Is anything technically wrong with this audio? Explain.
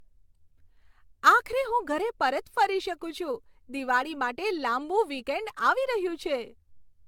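Yes, generation loss runs throughout. The speech sounds swirly, hollow and smeared, with soft attacks and nothing above 17 kHz, likely from about seven AAC re-encodes, each piling on fresh quantisation damage.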